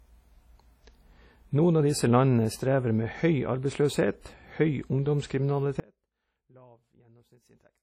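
From the start the speech carries heavy WMA compression, likely a WMA 1 encode at a low bitrate around 32 kbps. It sounds ringing and washy, with hiss that swells with each syllable. A spectrogram shows nothing above 15.9 kHz, and weak harmonics are gone between bands.

At 5.80 s the speech drops abruptly to a faint residue that lasts to the end, likely an audio dropout where the signal path stayed live. Only a trace remains, roughly 30 dB down, and the waveform collapses to a thin line with no fade.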